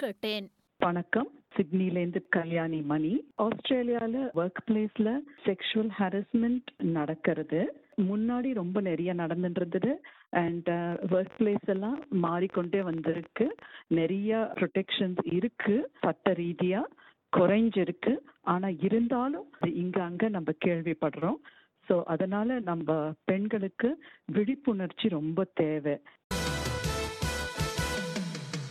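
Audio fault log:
10.92–13.63 s, train of clicks: a short burst of pulses, likely from electrical interference or a faulty connection or power supply, lands on the signal at about 13 per second with uneven spacing. Around forty sharp ticks result, each about as loud as the sound itself.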